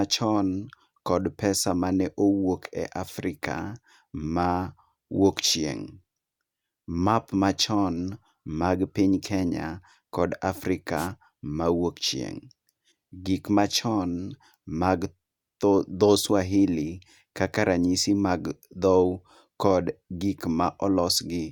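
Wireless microphone noise hit, 10.96 to 11.08 s: the FM radio link fades as reflections cancel, and receiver noise swells into a short static swish.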